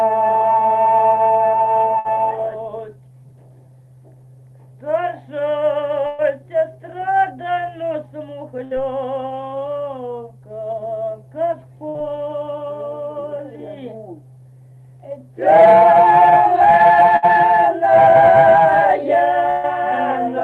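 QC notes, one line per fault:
1.99–2.08, 6.07–6.21, 8.64–8.74, 11.89–11.97, 17.16–17.25, 19.50–19.66 s burst of packet loss: about 60 ms of audio gone at four points and 120 ms at 6.07 and 19.50 s. The preceding sound is stretched and faded into the hole, then resumes further on with that stretch skipped.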